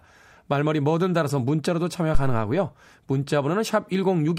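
A speech recording with a phantom power thump from 2.15 s to 2.53 s: a deep low-frequency thump peaking at about -7 dBFS and decaying in roughly 87 ms, consistent with phantom power being switched on a live input and the step passing through the coupling capacitors.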